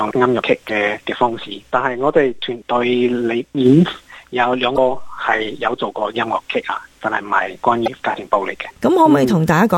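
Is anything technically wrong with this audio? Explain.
Yes, there is damaged data in a compressed stream at three points: 0.66 to 0.70 s, 4.74 to 4.78 s, and 7.84 to 7.88 s, each about 40 ms long. At each spot part of the encoded file was corrupted, so the decoder misread those frames, lost sync and hunted for the next valid frame header. On a spectrogram this shows as a narrow vertical strip where the normal pattern breaks off, and on the waveform as a brief disturbance in the signal.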